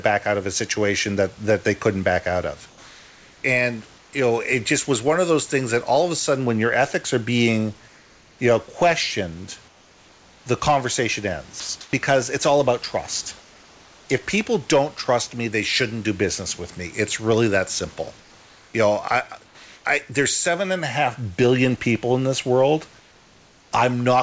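Discontinuous transmission on the sender's side likely produced comfort noise in place of the background. Each time its voice detector judged a pause silent, it stopped sending real audio and the receiver filled the gap with synthetic noise. The room noise, about 31 dB below the speech, gives way to a smooth, featureless hiss, sometimes about 2 to 3 dB quieter. This happens at 2.69 to 4.13 s (between "couldn't back out of" and "you know it just"), 7.88 to 8.39 s, 9.68 to 10.46 s (between "you know questioned" and "the conversation"), 11.60 to 11.93 s, 13.40 to 14.09 s, 18.20 to 19.85 s and 23.00 to 23.72 s. The call path, a G.722 link, passes nothing above 8 kHz, and the swap sounds like even noise replacing a textured background.

At 11.60 s, right after "the conversation", sound was dropped by the voice detector. The detector likely mistook the sound for background and stopped sending, so about 90 ms of real sound is cut away and replaced by the same steady comfort noise. 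The sound gives way to steady noise.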